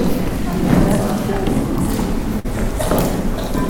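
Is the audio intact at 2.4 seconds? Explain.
No. A burst of packet loss hits from 2.39 to 2.46 s. Several consecutive packets never arrived in time to be played. The receiver covered the hole by extending the last sound it had and letting it fade out, for about 49 ms. So you hear a brief held, dimming smear instead of fresh audio. When playback picks up again, it has jumped ahead. About 40 ms of the original sound is simply gone.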